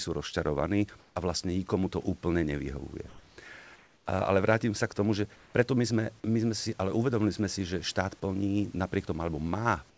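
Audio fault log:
1.0–1.16, 3.08–3.38, 3.76–4.06, 5.36–5.54 and 9.9 s to the end, comfort noise in place of the background: in these gaps the real room hiss gives way to a smooth, featureless noise, up to about 4 dB quieter, likely discontinuous transmission filling the pauses with synthetic noise.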